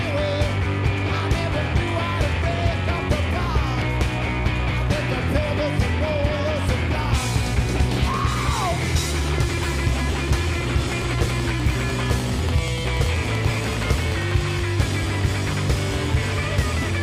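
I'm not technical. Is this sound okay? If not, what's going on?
No. From 10.82 to 14.52 seconds there is a train of clicks, most likely caused by electrical interference from nearby equipment or by a faulty connection or power supply pushing short pulses into the recording. You hear it as a steady ticking, about ten clicks a second at an even pace, around forty in all, each much like the last, riding on top of the sound and audible in any quiet gaps.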